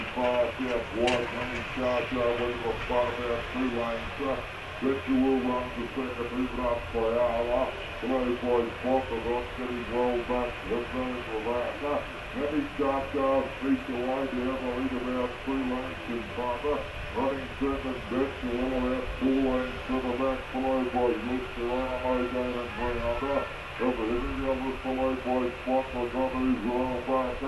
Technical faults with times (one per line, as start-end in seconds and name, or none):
0.00-27.48 wrong sample rate